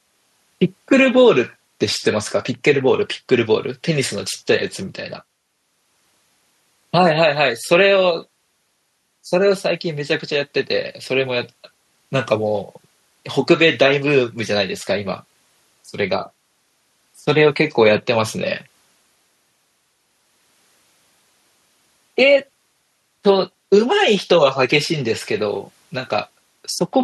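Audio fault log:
Nothing stood out on listening to this speech recording.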